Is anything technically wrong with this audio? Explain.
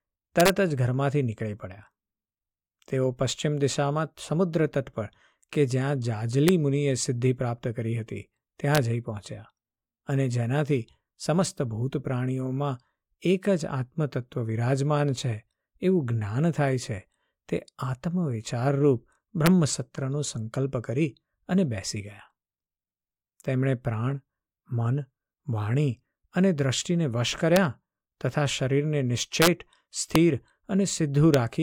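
Yes. Integer overflow hits this speech at 0.40–0.50, 6.48, 8.75–8.77, 19.46, 27.56, 29.42–29.47, 30.15 and 31.34 s. Peaks only about 0 to 2 dB over full scale wrap to the opposite sign, producing sharp cracks that show as full-height waveform reversals and vertical broadband spectrogram streaks.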